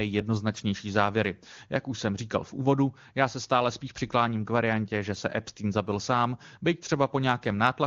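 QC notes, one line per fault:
No faults were heard in this speech clip. It comes through an AMR wideband (HD Voice) codec whose coding is at most faint, which fits its top rate of about 23.85 kbit/s.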